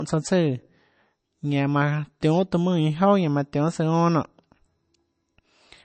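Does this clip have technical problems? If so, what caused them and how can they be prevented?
Yes. Throughout the speech, nothing is present above about 8.3 kHz, and the sound carries the smeared, swirly artefacts of heavy MP3 coding. This is likely low-bitrate audio saved at a high bitrate: a low-rate encode, consistent with roughly 32 kbit/s, was re-encoded as a large high-rate MP3. The second pass cannot restore the removed content. A genuine high-rate encode would extend well past 8.3 kHz without these artefacts, which distinguishes it from this case. To prevent it, always encode from the original lossless source rather than from an existing compressed file.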